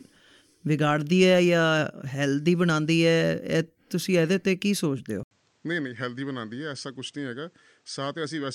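Input switched to a poorer device at 5.23 s: after an 80 ms silence, speech dulls with nothing above 9 kHz, about 10 dB quieter, likely another microphone.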